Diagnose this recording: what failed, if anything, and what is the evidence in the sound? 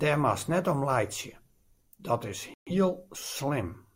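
A digital broadcast dropout at the reception stage: the receiver stopped getting decodable frames and muted its output until valid ones arrived again. In the speech, the sound cuts to silence at 2.54 s and resumes at 2.71 s, a hole of about 0.17 s. The missing material, roughly 128 ms of programme, fits about three lost frames, and it is gone rather than delayed, so the speech picks up later without what was sent in between.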